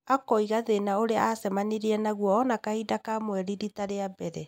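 No dropouts, clipping, glitches or other transmission or processing faults can be heard anywhere in the recording.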